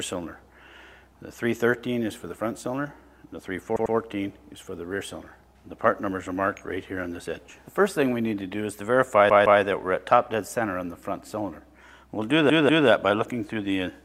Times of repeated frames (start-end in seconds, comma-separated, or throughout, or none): 3.76-3.95, 9.29-9.61, 12.49-12.88